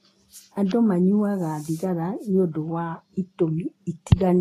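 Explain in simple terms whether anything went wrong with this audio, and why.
Transcoding between lossy codecs runs through the whole clip: the artefacts of different compression passes are heard together in the speech, with nothing above 14.2 kHz. It was likely squeezed by one compression format, then squeezed again by MP3, so the second pass preserved the first one's damage and added its own.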